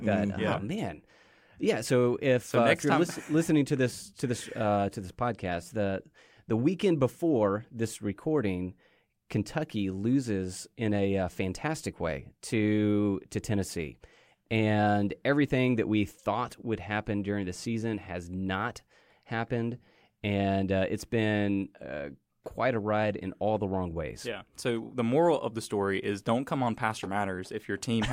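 No technical faults can be heard anywhere in the recording; the speech signal stays continuous and intact throughout.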